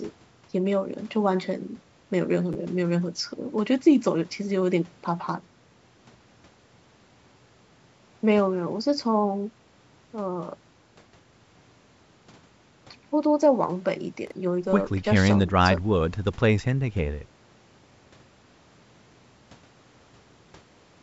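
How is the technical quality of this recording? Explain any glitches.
Two brief glitches spoil a call-style recording. Chunks out of order occur at 2.53 to 2.55 s and 14.27 to 14.32 s: a roughly 11 ms block plays one and then three slots late, leaving jumbled splices.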